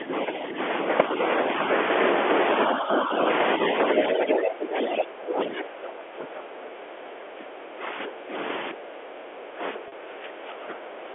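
Speech over a telephone line, heard within a band of roughly 300 Hz to 3.4 kHz. It has three faults. Speech suppressed in double talk pulls the talker down at 0–0.13 s, 0.49–0.58 s, 2.68–3.14 s, 4.11–7.83 s, 8.06–8.33 s and 8.72 s to the end. The dips are about 5 dB early on and deepen to about 15 dB in the later, longer stretches. On a waveform the envelope visibly sags there, and on a spectrogram the upper harmonics thin out. The likely cause is an echo canceller ducking the near talker while both sides speak. At 9.74–9.78 s the other side's voice leaks through as a brief scrap, well below the talker at around 20 dB down. It shows as a faint, separate harmonic smear, likely residual loudspeaker echo the canceller missed. Packet loss with pitch repetition then hits at 9.88–9.92 s. A 40 ms gap, which fits two lost 20 ms packets, is bridged by repeating the last pitch period. This gives a short buzzy hold that appears as evenly spaced, identical cycles in the waveform and a flat, frozen harmonic band on the spectrogram.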